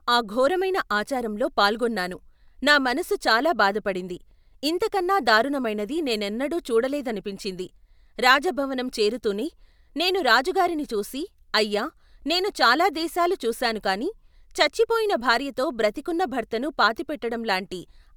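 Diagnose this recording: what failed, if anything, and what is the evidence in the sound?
Nothing failed: no stage in the chain, from capture through conversion, processing and playback, leaves any audible trace of a fault in this speech recording.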